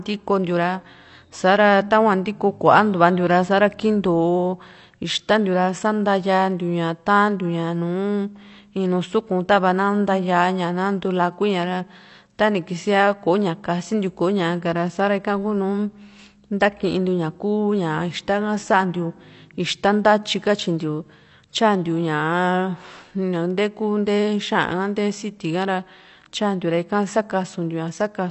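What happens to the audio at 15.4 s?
At 15.4 s the speech carries the same AAC compression damage that runs through the whole clip: a dull, band-limited sound with a watery, fizzy edge on sibilants and held vowels. Nothing survives above 8.1 kHz, which fits a low-bitrate AAC-LC encode around 32 kbps, the likely cause. The codec quantises each block's frequency lines coarsely and discards what it judges inaudible. On a spectrogram this shows as a hard ceiling at 8.1 kHz.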